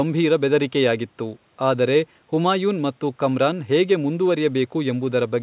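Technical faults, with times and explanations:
Nothing stood out on listening to this speech beyond the narrow band expected of a call line.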